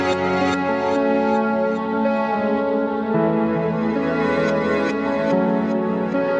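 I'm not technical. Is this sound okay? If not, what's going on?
Yes, nothing stood out as a problem when I listened to this audio.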